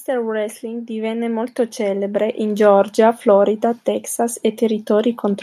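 From 0.08 to 2.87 s, automatic gain rising ramps quiet input up about 12 dB, swelling speech and background together; the waveform envelope widens steadily.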